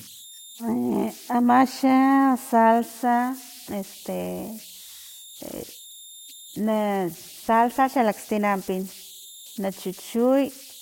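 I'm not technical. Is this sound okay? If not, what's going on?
No. A high whistle, somewhere around 4 kHz, runs through the whole recording, with a grainy hiss under the quieter parts of the speech. These are converter idle tones: the recording chip, working without its usual masking noise, falls into repeating patterns on quiet input.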